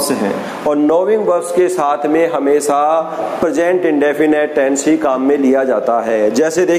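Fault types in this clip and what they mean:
gain pumping: All through the clip the background swells in each gap and ducks by around 10 dB under every loud sound, likely from far too much input gain with a fast limiter clamping it. Unlike a noise gate, gaps rise rather than fall silent.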